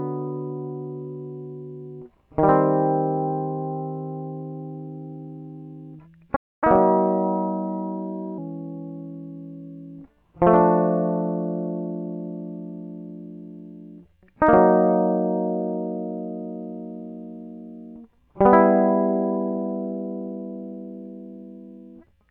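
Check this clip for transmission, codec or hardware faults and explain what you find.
There are two linked faults in this music, right around the 6-second mark.

At 6.35 s there's a playback stall: the music just drops out for about 0.26 s, until 6.64 s. That's likely the player running dry of buffered data or having its output thread blocked, so nothing reaches the output until it recovers.

From 6.64 to 8.38 s you get catch-up at higher speed. The player resamples its backlog to run 1.15 times fast, so tempo and pitch both jump, about two semitones sharp, before settling back to normal once the lost time is recovered.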